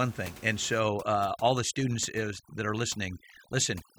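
Overdone noise removal runs from 0.80 s, right after "thing and", to the end of the speech at about 3.99 s. The noise reducer is set too aggressively for the room noise, which sits about 20 dB below the speech. Each frequency band that dips near its noise estimate is pulled far down or cut entirely, taking quiet parts of the voice with it. The background drops and breaks up into twinkling, warbling specks.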